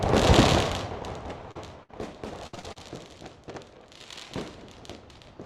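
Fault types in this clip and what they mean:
short concealed packet loss: A brief smear around 1.51 to 1.57 s where the sound wobbles for a moment instead of moving on cleanly. About 40 ms of audio never arrived in time, and the receiver bridged the hole by extending the preceding sound before blending back.
burst of packet loss: At 1.83 to 1.91 s the sound hangs and thins into a fading held tone or hiss, then picks up slightly further along. Roughly 60 ms of consecutive audio was lost, and the receiver stretched the last sound while lowering it.
repeated packet loss (robotic sound): From 2.47 to 2.78 s the audio turns choppy, breaking up four times in quick succession. Each missing piece, the longest 62 ms, was patched by repeating the previous sound, so about half of that stretch is synthesized fill.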